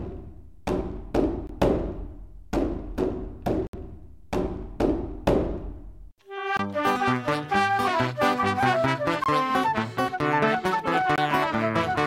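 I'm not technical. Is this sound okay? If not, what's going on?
No. There are five blocks of digital silence, at 1.47, 3.67, 6.57, 9.24 and 11.16 s. Each cuts the sound abruptly for about 21 ms (64 ms at 3.67 s), most likely because the program didn't supply its next chunk of audio in time.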